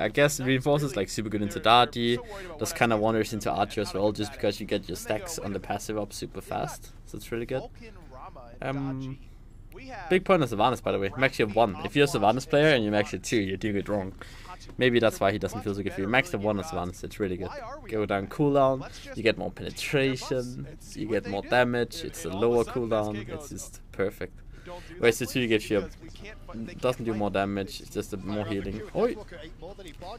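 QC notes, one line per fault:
Nothing stood out on listening.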